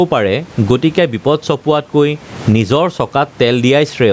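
Throughout the clip the room noise sits about 34 dB below the speech, and the speech sounds squashed and flat in level. This is gain pumping, with the level swinging by roughly 15 dB. The likely cause is a microphone gain set far too high, with a fast limiter or compressor clamping down on each loud sound.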